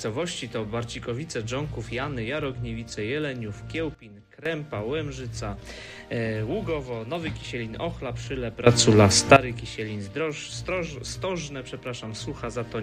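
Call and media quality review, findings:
Sudden gain jump, 3.95–4.46 s: level drops by about 14 dB in one step, background noise falling with the sound, then returns. Sudden gain jump, 8.67–9.36 s: level rises by about 17 dB, noise floor rising with it. Likely cause in both: a digital gain stage applying a new setting between adjacent samples with no ramp. Because signal and noise move together, the fault sits in the gain path, not the source.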